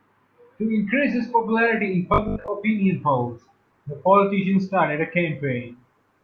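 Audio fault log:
2.14–2.48 s, robotic sound from repeated short buffers: the speech hardens into a rigid, metallic 50 Hz buzz that still loosely follows the syllables. The likely cause is a starved playback buffer, where a 20 ms slice is replayed instead of fresh audio, so roughly half this stretch is repeats. A spectrogram shows flat, evenly spaced 50 Hz harmonic lines, and the waveform shows identical 20 ms cycles.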